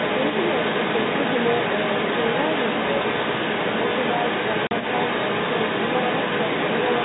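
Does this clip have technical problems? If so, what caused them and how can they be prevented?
Yes. A second voice, the other side's voice leaking through, runs under the speech for the whole clip, at roughly the same loudness as the talker. It is most likely residual echo: the far end played on a loudspeaker and re-entered the microphone, and the echo canceller failed to subtract it. Unlike crosstalk from another line, this voice is the conversation's own far end returning. Using a headset, or a device with a properly tuned echo canceller, would prevent it.

At 4.67 s the speech drops into a hard 40 ms gap of silence. This is packet loss filled with silence, and the length fits four consecutive 10 ms packets going missing. No concealment was applied, so the hole is abrupt and silent. That sets it apart from a concealed loss, which would be smeared or repeated sound, and from a gate closing, which would fade rather than cut. 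Enabling packet loss concealment and a jitter buffer at the receiver would prevent it.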